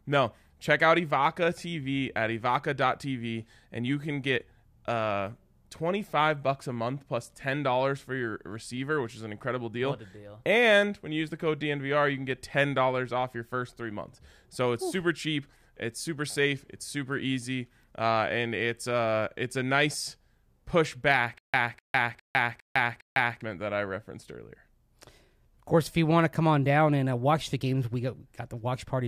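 In this speech clip, from 21.38 s to 23.41 s, the same 0.25 s burst of sound plays five times over, each followed by about 156 ms of dead digital silence, so it returns at a steady pace of one repeat every 406 ms. This stutter with silent gaps is most likely a stalled player or stream that replayed its last fragment at each retry and then ran empty, so the audio due in that stretch never arrives.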